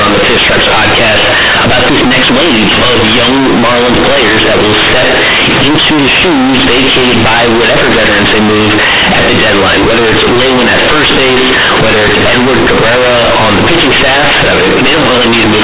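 Companded audio read as linear, throughout: mu-law bytes are played as plain 8-bit samples without expansion, so every sign change swings widely, giving loud, buzzy distortion and heavy noise in pauses.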